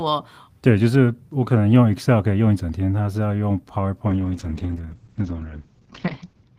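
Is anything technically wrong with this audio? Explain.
Yes. From 4.08 s to the end of the clip there is a call bitrate drop. The call's bandwidth estimate fell, so the encoder was forced to spend far fewer bits. The drop in quality fits a fall from 32 kbps to 8 kbps, held at the bottom for about 2.4 s. The coder quantises more coarsely and narrows its audio band from 20 kHz to 8 kHz. The speech turns rough, watery and muffled and doesn't recover before the clip ends.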